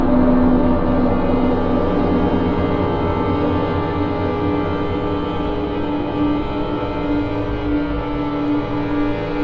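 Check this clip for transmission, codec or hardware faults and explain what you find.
No transmission, codec or hardware faults are audible in this clip.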